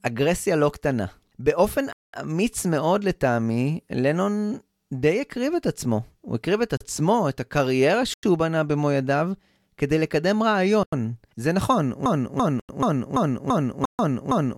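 Speech with two kinds of fault. Blocks of digital silence cut in abruptly at 1.93 to 2.14 s, 6.77 s, 8.14 s, 10.83 s, 12.60 s and 13.85 to 13.99 s. The gaps at 8.14, 10.83 and 12.60 s each last 93 ms, which fits an unfilled 4096-sample buffer. From 12.06 s to the end, a 338 ms fragment repeats back to back as a broken-record loop, likely from a stalled stream, and the audio that should have played there is lost.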